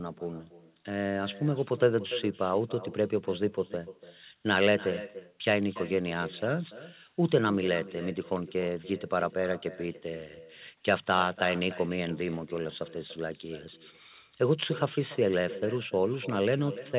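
Echo with no canceller runs throughout the speech. The far end plays the call on a loudspeaker, its microphone picks that playback up, and nothing subtracts it before it is sent back, so each phrase returns after the network round trip, roughly a third of a second later. The returning copy sits about 16 dB below the direct speech, thinner, and its band stops at 4 kHz, which fits a narrowband telephone codec such as G.711.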